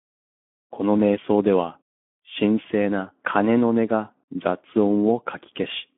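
Speech through a Speex codec throughout, hoarse and noisy, pointing to a low bitrate near 11 kbps. A spectrogram shows a 200 Hz to 3.4 kHz band, empty above 3.6 kHz.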